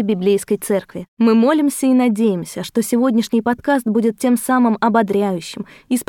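No technical faults can be heard anywhere in the speech recording.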